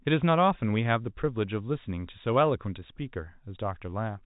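No technical faults occur anywhere in this speech clip, which carries the narrow telephone band of G.711 coding.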